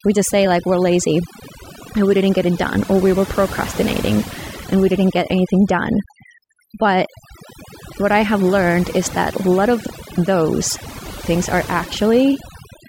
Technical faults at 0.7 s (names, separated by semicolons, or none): overdone noise removal